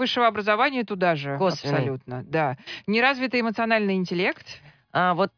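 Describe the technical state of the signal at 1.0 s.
At 1.0 s the speech signal is intact, with no audible technical fault at that moment.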